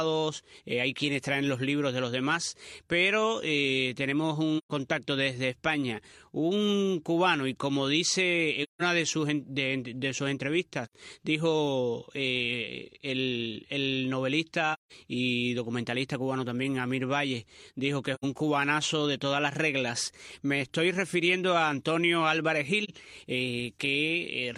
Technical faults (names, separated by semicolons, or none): AAC frame loss with muting